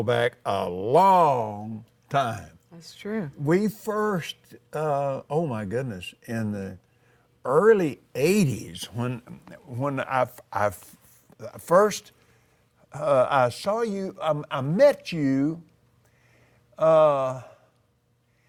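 Clock drift between sender and receiver runs through the whole clip: the sender's clock is about 1.5% slow, so the jitter buffer keeps draining and leaves small, unevenly spaced timing hiccups. From 0.44 s to 17.95 s, repeated timing corrections repeat short pieces to keep the receiver in step, adding about a third of a second and leaving the sound at 98% speed.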